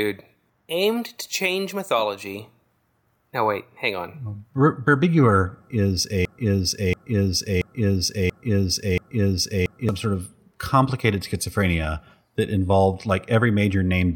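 From 6.25 to 9.89 s a broken-record loop replays one 0.68 s fragment five times back to back, identical each pass with no fading, unlike an echo, likely from a stalled player or stream. The audio meant for that span is lost before "sort of complicated schizophrenia".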